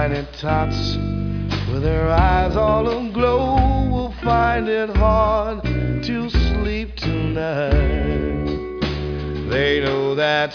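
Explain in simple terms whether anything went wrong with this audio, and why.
Nothing went wrong here.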